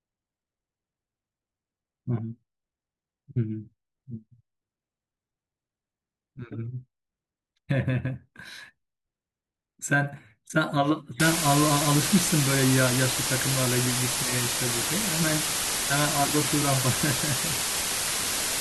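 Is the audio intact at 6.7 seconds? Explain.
Yes, the speech at 6.7 seconds plays through intact, with no dropout, click, distortion or other fault at that point.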